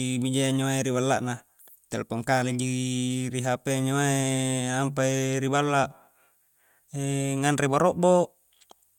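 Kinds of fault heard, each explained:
No technical fault is audible anywhere in this speech recording.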